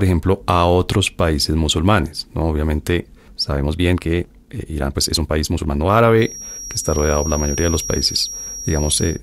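A speech recording with two faults. From 3.46 to 6.02 s there is a time-stretched section: the pace jumps to about 1.42 times normal and sounds rushed, yet the pitch stays put. That rules out simply speeding up the playback, which would raise the pitch, and likely points to software dropping short slices to shorten the passage. From 6.15 s to the end a feedback whistle sits at 5.7 kHz, roughly 10 dB below the speech. Unlike a steady electrical tone, it swells and fades slowly in level, likely because a loudspeaker-to-microphone loop is hovering just short of runaway feedback.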